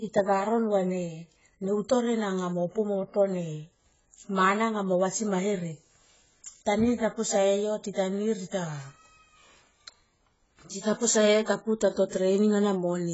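From start to finish the speech is dull and smeared, with nothing above 7.7 kHz and a warbling, fizzy texture on sibilants and held sounds. The cause is likely heavy AAC compression, consistent with AAC-LC at a low bitrate around 16 kbps, where the encoder lowers its cut-off and leaves holes in the spectrum. A plain low-pass filter would dull the top but leave the remaining sound clean; here the swirling, watery artefacts point to a codec.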